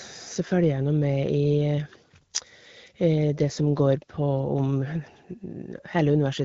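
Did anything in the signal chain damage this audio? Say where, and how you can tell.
No, nothing in the signal chain audibly damaged this speech.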